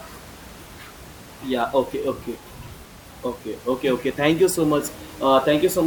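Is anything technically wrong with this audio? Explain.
Yes. There is audio missing between chunks at 2.85 s and 4.84 s, with roughly 7 ms cut out each time. The gaps fall 2 s apart, so the likely cause is processing in 2-second blocks that drops a few milliseconds at each handover. The two sides are butted together with no silence, so each join sounds like a tiny skip or tick in the speech. Room noise sits about 21 dB below the speech.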